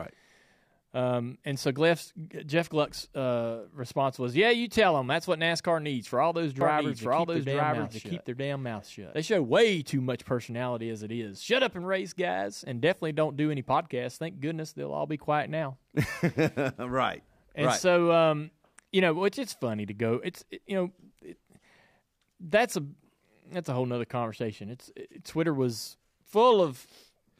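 A doubled audio track runs from 6.61 to 9.13 s in this speech clip: a second full-band copy, about as loud as the original, trails it by roughly one second with no decay, starting and stopping abruptly, likely from a slower capture path or misaligned edit.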